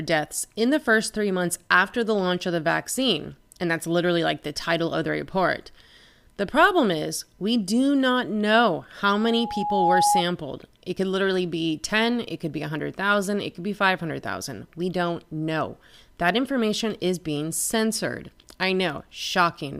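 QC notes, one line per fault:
9.13–10.23 s, loudspeaker feedback squeal: right after "do not know how", the microphone picks up its own loudspeaker and the loop gain passes unity at 829 Hz. That single tone swells over roughly 0.7 s into a squeal sitting about 5 dB above the speech, then stops.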